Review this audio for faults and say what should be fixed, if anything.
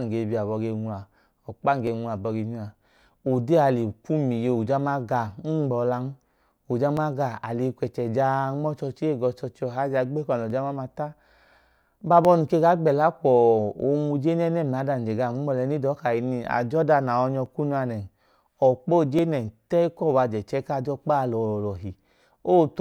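Seven sharp single clicks in the speech at 1.87 s (just after "ọkpa num"), 6.97, 7.88, 10.50, 12.25, 17.46 and 19.19 s (just before "nẹ ta") are likely dropped samples. Under a millisecond of signal goes missing each time, so the waveform jumps abruptly. Preventing this means giving the capture or playback path enough buffer headroom that the audio stream is never starved or overrun.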